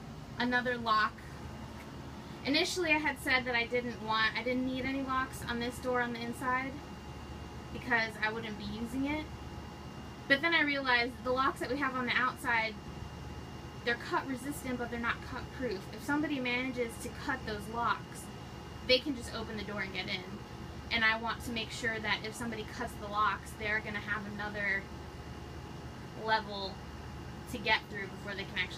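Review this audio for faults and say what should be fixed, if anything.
Nothing in this audio needs fixing, as no faults turn up on review.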